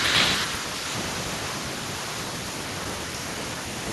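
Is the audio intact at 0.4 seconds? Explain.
Yes, at 0.4 seconds the speech plays through intact, with no dropout, click, distortion or other fault at that moment.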